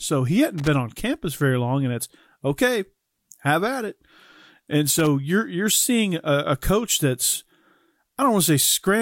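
Loose connector crackle at 0.58 to 0.68 s, just before "on campus very long", and 4.99 to 5.07 s, before "you're you're seeing a", interrupts this speech clip: a worn contact briefly breaks, chopping the signal into scratchy bursts.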